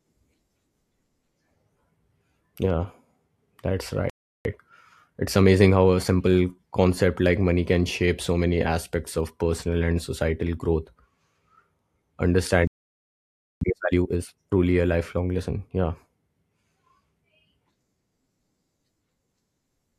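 Speech that twice drops into silence mid-flow and then rushes to make up the lost time. The first gap runs from 4.10 to 4.45 s, about 0.35 s. The second is longer, from 12.67 to 13.61 s, close to a full second. Neither is a dropout with noise or a click. The audio simply halts and resumes, which is a playback stall, most likely the player running short of buffered data or its output thread being blocked until it could recover.

Each stall is followed by time-compressed catch-up, where the player trims its backlog by cutting small slices out of the audio and cross-fading the joins. Pitch stays normal, but the delivery sounds hurried. After the first stall it runs from 4.45 to 6.81 s at about 1.15 times normal speed, settling just before "like money can shape". After the second it is far faster, doubling the pace from 13.61 to 14.53 s before returning to normal ahead of "a lifelong lesson".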